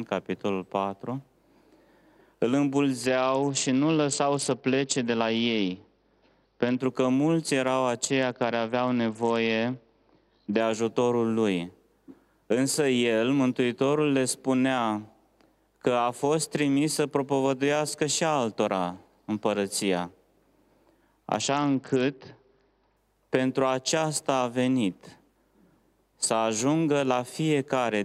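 A Bluetooth SBC bit pool drop occurs three times: 3.06 to 6.79 s, 8.10 to 10.60 s, and 21.41 to 22.97 s. In each stretch the link appears to have been squeezed, and the encoder cut its bit allocation sharply, which fits a fall from a bit pool of 31 to about 8, near 66 kbps. The highest sub-bands are starved, so treble dulls, while coarser quantisation of the remaining bands adds a gritty noise until full quality returns.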